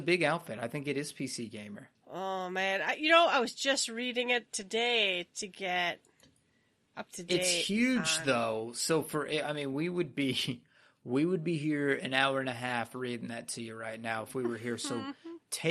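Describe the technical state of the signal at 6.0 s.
The signal at 6.0 s is intact, with no technical fault present at that point in the speech.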